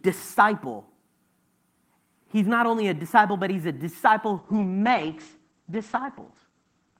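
Speech that turns rough, watery and muffled from 4.38 s to the end, losing its top end. It's a call bitrate drop: the encoder falls from 40 to 10 kbps, coding more coarsely and narrowing the bandwidth from 20 kHz to 8 kHz.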